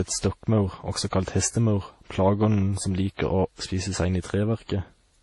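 Throughout the speech, nothing sounds above 11.2 kHz. Two layers of compression artefacts are heard together. This is likely transcoding between lossy codecs. The sound points to a low-rate MP3 re-encoded as WMA. The second codec spent bits reproducing the first's artefacts and added its own.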